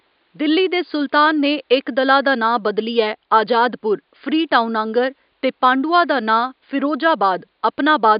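No technical faults are audible in the speech, and the room's background noise sits about 49 dB below it as part of the original recording.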